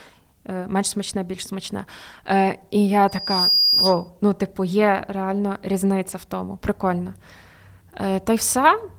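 Loudspeaker feedback squeal from 3.08 to 4.10 s, just before "ну типу є реально": the microphone re-amplifies its own loudspeaker output, so a 4.9 kHz tone swells over about 0.4 s to roughly 5 dB above the speech.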